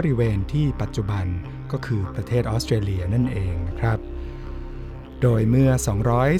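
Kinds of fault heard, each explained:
Sample clock jitter: from 3.85 s to the end, the converter clock wanders by a few microseconds, so samples land slightly off time. Errors follow waveform slope, adding a hiss or roughness around 40 dB below the sound, strongest on loud, bright passages.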